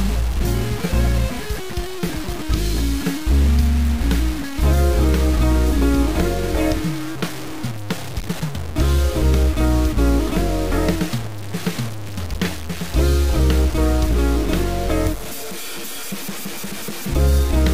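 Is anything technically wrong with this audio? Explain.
Yes. The whole clip has low bit depth without dither, from start to end. The grit follows the sound itself, so it rises and falls with the signal. The likely cause is a reduction to about 4 bits, with values truncated and not dithered. So few levels leave the rounding error tied to the waveform. That error sits only around 15 dB below the signal. Quiet passages turn harsh and buzzy, and the faintest parts sputter or vanish.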